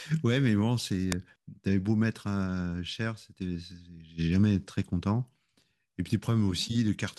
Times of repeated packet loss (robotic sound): none

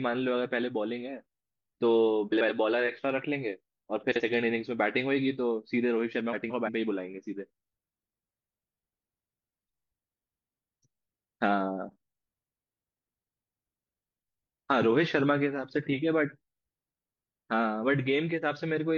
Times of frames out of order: 2.32-2.50, 4.11-4.20, 6.32-6.69

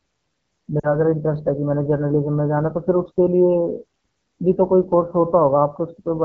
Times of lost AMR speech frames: 0.80-0.95

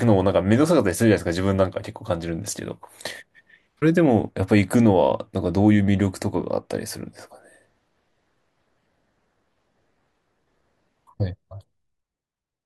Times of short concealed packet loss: none

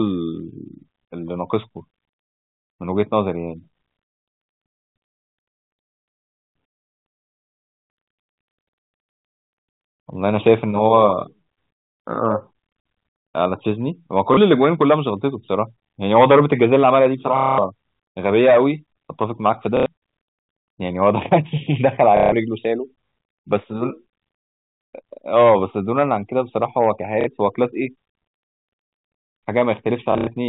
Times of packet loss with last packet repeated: 7.56-7.86, 14.34-14.37, 17.37-17.58, 19.77-19.86, 22.17-22.32, 27.21-27.27, 30.12-30.27

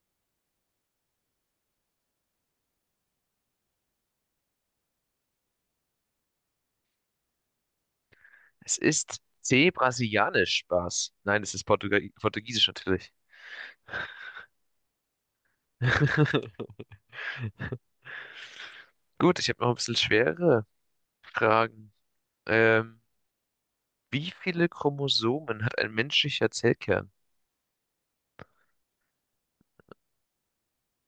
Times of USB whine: none

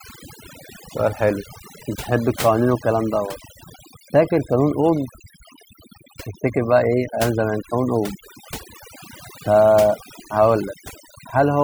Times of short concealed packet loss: none

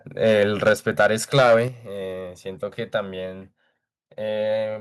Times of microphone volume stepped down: 0.69, 1.68

